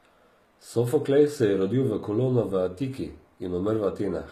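From start to finish the speech carries plainly audible codec damage, and it sounds like HE-AAC compression is the likely cause. The s sounds come out gritty and lispy, with a metallic sheen, because the treble isn't the original: it's been rebuilt by copying lower bands upward and shaping them roughly, so the harmonics don't line up. There's nothing above about 14.9 kHz, and the overall roughness points to a very low bitrate, around 20 kbps.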